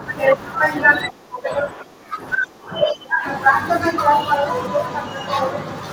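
From 0.27 s to 5.91 s, faint regular ticks run beneath the speech, roughly every 0.4 s, about fifteen in all, clearest on loud sustained sounds. These are clock slip clicks, likely caused by two devices running on separate, unsynchronised clocks that differ by something near 50 ppm. Each time that drift adds up to a whole sample, a single sample is dropped or repeated, and the small discontinuity produces a tick.

Between 1.1 s and 3.27 s the talker's voice dips, thins and breaks up in pieces for about two seconds in total, falling by as much as about 25 dB at its deepest. This is speech suppressed in double talk, likely from both sides speaking at once: the echo canceller could not tell the near talker apart from the loudspeaker echo, so it turned both down together.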